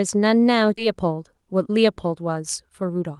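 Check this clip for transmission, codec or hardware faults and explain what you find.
Two transmission faults are audible, both tied to the receiver's jitter buffer, and both sit on top of a call-codec path whose top end stops near 12 kHz, consistent with Opus at about 32 kbps.

Skip ahead, at 0.77 to 0.79 s: the speech jumps forward with no fill and no pause. Roughly 0.7 s of audio never gets played, either lost in transit or discarded when the jitter buffer overflowed while later packets were already queued. The two sides of the cut are spliced almost directly, so the phrase sounds abruptly truncated and the next part arrives early.

Jitter buffer speed-up, from 0.94 to 3.11 s: the buffer held more audio than its target and trimmed it back by repeatedly cutting out short pitch-period-length segments. Over this stretch about a fifth of a second is removed, giving a playback rate of about 109 percent. 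Pitch stays unchanged, but the speech runs noticeably quicker and sounds rushed.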